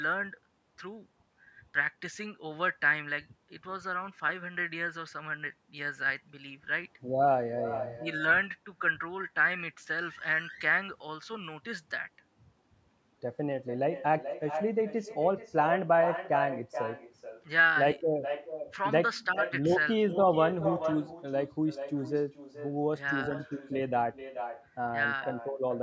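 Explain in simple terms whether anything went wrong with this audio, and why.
Something did go wrong: an echo with no canceller. On the far end of the call, the sound was played through a loudspeaker, the microphone there picked it back up, and nothing stripped it out before it returned. So from start to finish, every bit of the talker's speech is followed, a little under half a second later, by a quieter, thinner copy of itself.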